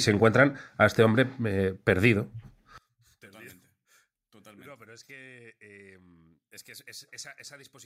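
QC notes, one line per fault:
2.78–7.85 s, one channel inverted: from 2.78 s to the end the speech collapses by about 29 dB, leaving only a faint residue. The likely cause is reversed polarity on one stereo channel, so the centred content common to both sides cancels when summed to mono. Unlike a dropout or fade, a trace of the signal persists, and it would return at full level if the channels were heard separately.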